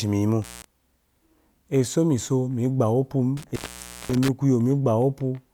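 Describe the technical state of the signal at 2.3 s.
At 2.3 s the speech signal is intact, with no audible fault at that point.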